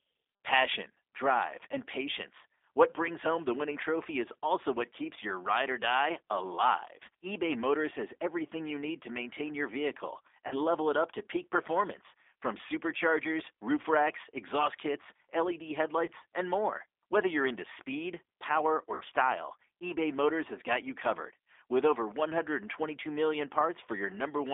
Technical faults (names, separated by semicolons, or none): G.729 codec; VoIP packet loss concealed by the speech codec